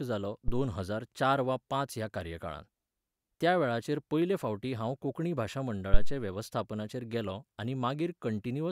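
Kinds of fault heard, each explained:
Phantom power thump: at 0.48 s and 5.94 s, a deep thud cuts into the speech. Switching a supply on a live input pushes a voltage step through the coupling capacitors. The first peaks at about -18 dBFS and decays over 53 ms; the second, louder at about -7 dBFS, decays over 60 ms.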